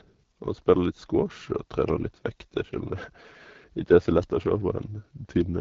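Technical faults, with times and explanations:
Throughout, AMR wideband (HD Voice) codec: the encoder models speech with a pulse-driven vocal tract filter on a very small bit budget, so the speech comes out rough and raspy with plainly audible coding damage, which fits the 8.85 kbit/s mode. Nothing sounds above 7.5 kHz.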